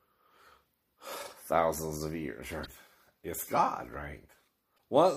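Damaged data in the compressed stream corrupts two short stretches, from 2.63 to 2.68 s and from 4.74 to 4.79 s. Each time the decoder misreads the broken frames and loses sync until it finds a valid header, leaving a brief glitch.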